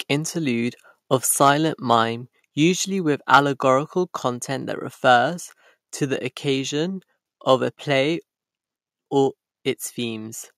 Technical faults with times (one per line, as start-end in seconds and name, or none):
1.42-1.50 microphone overload
1.91-1.95 microphone overload
2.04 microphone volume stepped down
3.33-3.37 microphone overload
4.08 microphone volume stepped down